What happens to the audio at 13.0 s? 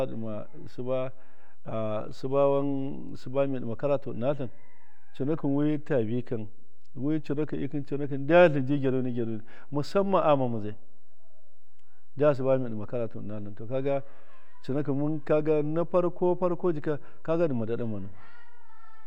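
DC offset is present at 13.0 s, as it is for the whole of this speech clip. The entire waveform sits displaced from the zero line by a constant amount, about -30 dBFS, so every sample carries the same fixed shift. Nothing audible marks the moment itself; the offset cannot be heard as a sound, but it eats into headroom on one side of the waveform and appears as steady energy at 0 Hz in the spectrum.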